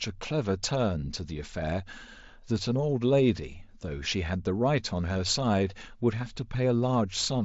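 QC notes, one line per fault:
5.14 s, concealed Bluetooth headset packet loss: a tiny dropout of about 15 ms, consistent with a couple of lost headset frames, gets patched by repeating a best-matching slice of the preceding waveform. It's short enough to pass as a brief buzzy blip before the wideband mSBC sound carries on.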